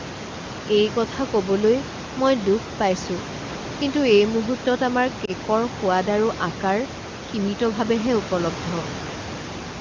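Speech, with one instance of lost AMR speech frames at 5.25 to 5.31 s, which fits a single lost frame. The wideband decoder briefly repeated its last pitch and vocal tract settings at lower gain, causing a short dip or warble rather than the hard silent gap or click of a plain dropout.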